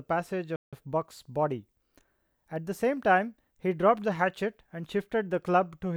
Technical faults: playback stall

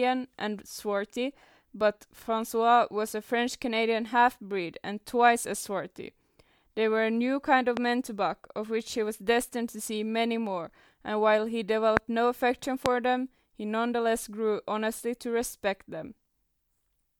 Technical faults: loud pop

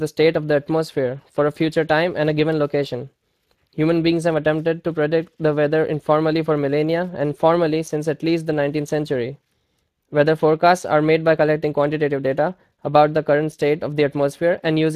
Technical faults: Speex codec

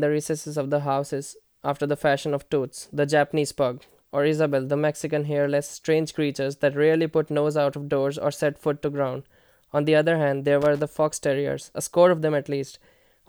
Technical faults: loose connector crackle

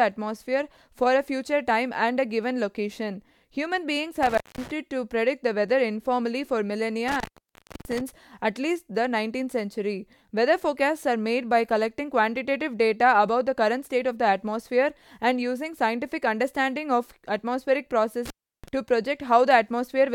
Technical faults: intermittent contact

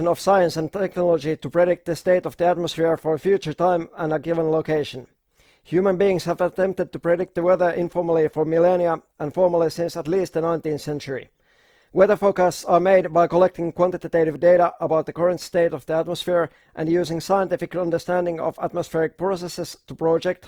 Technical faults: Opus compression

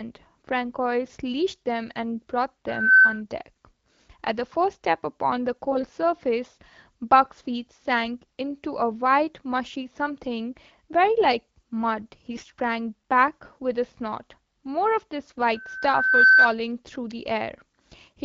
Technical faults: loudspeaker feedback squeal; AMR bit errors

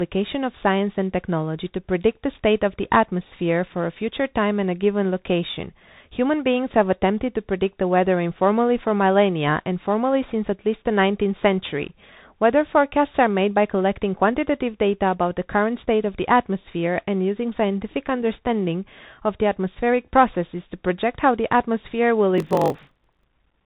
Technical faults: Bluetooth CVSD headset codec; block size mismatch (padded)

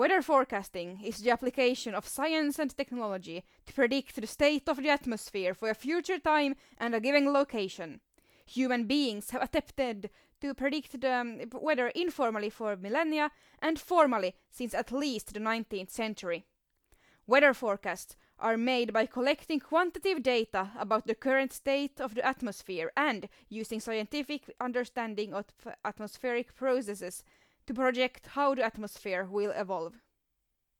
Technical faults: none

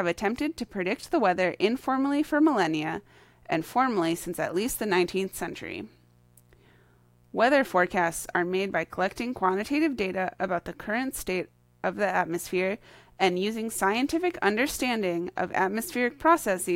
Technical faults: mains buzz

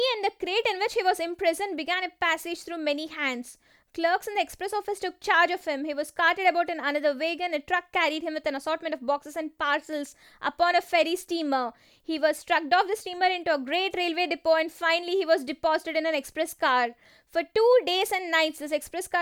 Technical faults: none

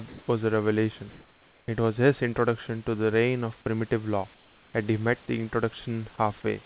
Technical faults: comfort noise in place of the background

